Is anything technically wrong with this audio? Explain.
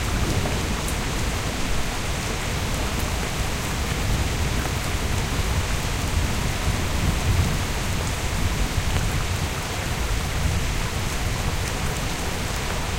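Yes. There are three loud pops, at 3.23 to 3.25 s, 4.66 to 4.68 s and 8.97 to 8.99 s. Each is a single sharp click about 20 ms long, roughly 10 dB above the surrounding sound for the first two and roughly 15 dB for the last. The likely cause is a brief voltage spike, from a connector, switch, static discharge or driver glitch, added on top of the signal. The sound continues underneath each pop.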